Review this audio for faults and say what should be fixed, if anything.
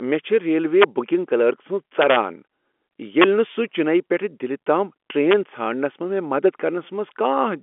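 Integer overflow at 0.81–0.84 s (between "چھ ریلوے" and "بکنگ کلرک"), 2.02–2.17 s, 3.22–3.24 s and 5.31–5.33 s. On these loud speech peaks the sample values ran past the top of the integer range and wrapped to the opposite sign, throwing the waveform across its full span. The result is harsh cracks far sharper than clipping, even though the peaks exceed the limit by only about 0 to 3 dB, with the longest and worst at 2.02 s. These cracks stand out against the narrow telephone-band G.711 sound, which carries nothing above about 3.7 kHz. To prevent this, use saturating arithmetic or a limiter before the integer conversion so that peaks clamp at full scale instead of wrapping.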